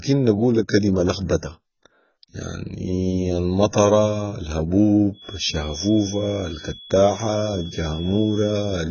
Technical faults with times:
0.00-8.91 AAC compression
5.10-8.91 feedback whistle

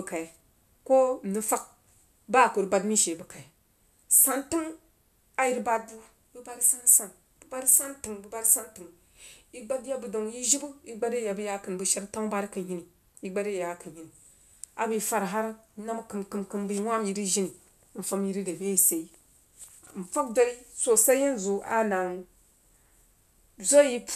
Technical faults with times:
none

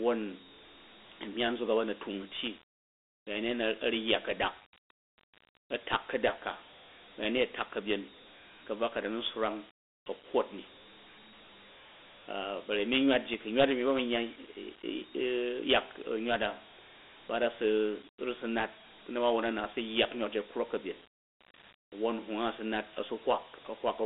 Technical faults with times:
0.00-24.06 Dialogic VOX ADPCM

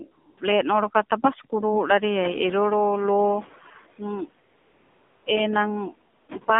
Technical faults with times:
0.00-6.60 noise suppressor artifacts
0.00-6.60 AMR narrowband mobile codec
0.12-0.38 AMR comfort noise
2.22-3.55 noise suppressor catching up
4.50-5.26 AMR comfort noise
6.16-6.28 AMR comfort noise

